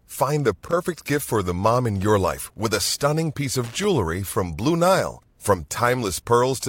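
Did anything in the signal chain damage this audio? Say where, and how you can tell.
Yes, loose connector crackle in the analogue wiring. Irregular scratchy bursts occur at 0.63–0.73 s and 3.64–3.84 s. A worn contact keeps breaking, chopping the signal.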